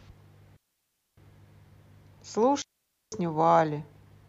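At 0.56 s the speech cuts to near silence until 1.17 s, and again from 2.62 s to 3.12 s, gaps of about 0.61 s and 0.50 s. Both are digital wireless dropouts: the receiver lost too much of the incoming data stream and muted its output rather than pass corrupted audio. Each hole opens and closes with a very short fade and clean edges, with no noise burst, click or hiss on either side.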